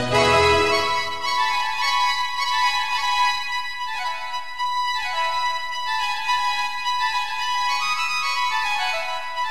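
Nothing technical stands out in this short piece of music; it comes through without any audible trouble from the playback or recording chain.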